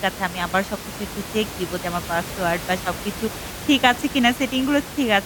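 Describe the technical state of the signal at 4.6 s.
At 4.6 s the signal is intact, with no dropout, distortion or other fault, and only the room's own background noise sits about 12 dB below the speech.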